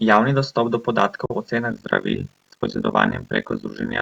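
At 1.26 s, right after "dostop do", the speech cuts out in a digital broadcast dropout lasting until 1.35 s. The receiver stopped trusting the incoming data and muted, with a very fast fade of about 3 ms. The hole points to a single lost frame of roughly 43 ms, and that stretch of speech is simply gone. On a waveform it shows as a flat line with near-vertical edges. On a spectrogram it is a clean vertical blank across all frequencies.

From 1.71 s to the end, overlap-add ripple takes over. The audio was split into windowed frames and rejoined with overlaps that don't sum to a constant gain, so the level swings once per frame, about 50 times a second. The swing is huge, about 60 dB, and the result is a harsh, buzzy, robotic tremolo. The waveform envelope looks chopped into a regular comb of peaks and near-silent troughs. The spectrogram shows evenly spaced vertical striping, with sidebands smeared around each harmonic.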